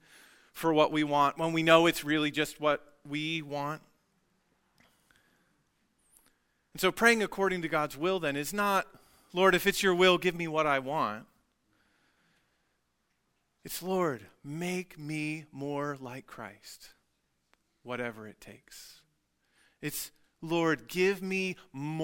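Nothing in this speech recording stands out as a technical problem, so there's nothing here to flag.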